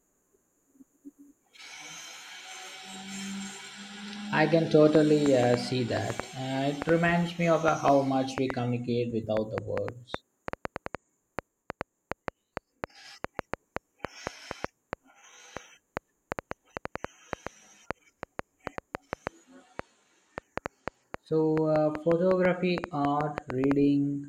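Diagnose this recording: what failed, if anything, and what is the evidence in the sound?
A train of clicks runs through the speech from 4.95 s to 23.72 s, averaging about 4.2 per second at an uneven pace, so roughly seventy in all. They stand out well above the speech, peaking about 15 dB over it, and keep ticking through the pauses. Each pulse has much the same shape, which points to something outside the audio, likely interference from nearby equipment getting into the analogue wiring or a faulty connection or power supply.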